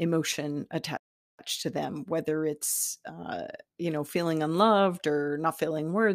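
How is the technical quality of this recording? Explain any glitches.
The speech is interrupted once by a playback stall. From 0.97 s to 1.39 s the output drops to complete silence for about 0.42 s, cutting the talker off in mid-flow. The audio then resumes at "to them whether it's". The likely cause is the player running out of buffered data, or its audio thread being blocked, so nothing was delivered to the output until it recovered.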